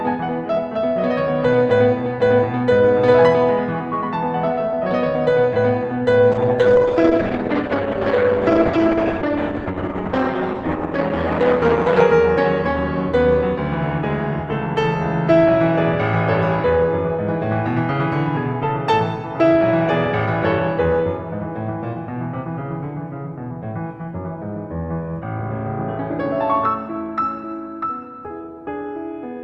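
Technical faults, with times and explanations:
6.35–12.13 s, call bitrate drop: the music turns rough and watery as the Opus encoder codes far more coarsely, fitting a fall from 32 kbps to about 11 kbps. On a spectrogram, the usual 12 kHz ceiling collapses lower, with smeared, blocky texture, until recovery.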